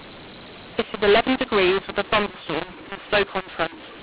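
mu-law and A-law mixed up runs through the entire clip. The speech was coded with G.711 mu-law but decoded as A-law, so each 8-bit code is expanded on the wrong logarithmic curve. Sample levels come out scrambled, some too large and others too small, and the quietest values are lifted well above silence. The speech sounds harsh and gritty, and the pauses fill with noise, all inside the telephone band that stops at 4 kHz.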